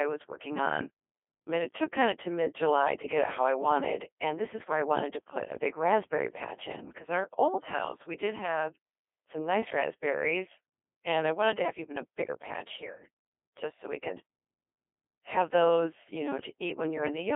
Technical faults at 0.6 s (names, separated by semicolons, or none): Codec 2 vocoder